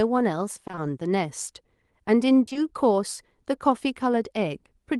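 Short concealed packet loss hits at 0.67–0.71, 0.71–0.75, 0.75–0.79, 2.45–2.49, 2.49–2.53 and 2.53–2.57 s. Each 20 ms gap was filled by extending the preceding sound. Each run of three is heard as a smeared, wobbling blur.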